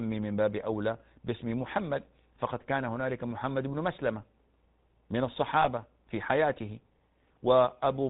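The whole clip passes through the GSM full-rate codec, which rebuilds the voice from a vocal-tract model driven by sparse pulses and discards everything above 4 kHz. The damage is plainly audible: a muffled, buzzy, gravelly speech, consistent with a 13 kbps GSM stream.

From 5.6 to 5.69 s, lost GSM frames interrupt the stream. About 40 ms of data goes missing, which fits two dropped frames. The decoder covers the gap by repeating the last good frame's settings, so the speech briefly freezes into a rough, metallic ring.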